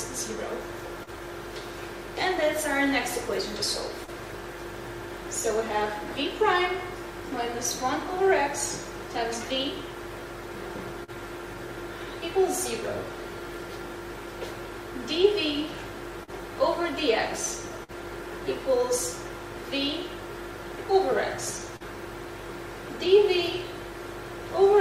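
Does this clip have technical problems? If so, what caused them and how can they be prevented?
Yes. There's short concealed packet loss at 1.03–1.18, 4.04, 11.04, 16.24 and 21.76 s: about 40 ms went missing each time, and the receiver papered over it by extending the previous sound, so you get a brief smear or wobble. A steadier network path and a slightly deeper jitter buffer would cut this down. At 17.83–17.91 s there's a burst of packet loss, a longer run of around 50 ms of fill, where the last sound is held and fades before the audio picks up further along, leaving that stretch missing. Stronger forward error correction or more redundancy on the link would help guard against bursts like this.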